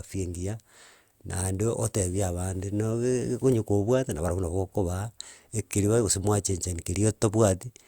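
No technical faults can be heard anywhere in the speech recording. There is nothing in the audio that calls for a timestamp or further comment.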